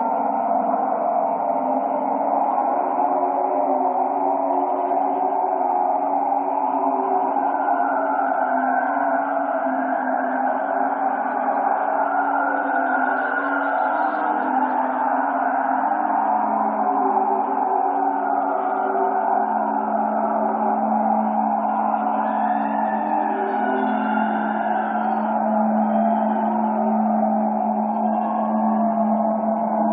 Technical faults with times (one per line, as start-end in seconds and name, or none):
none